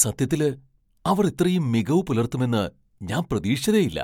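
Nothing in the speech stood out as a technical problem on listening.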